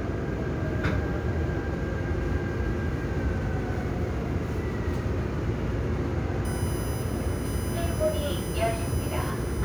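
From 6.45 s to the end, a USB whine sits under the sound. Current drawn in 1 ms bus frames leaks through power or ground as a fixed 1 kHz series, strongest at 11 kHz, about 15 dB down. Its kilohertz pitch separates it from low mains hum.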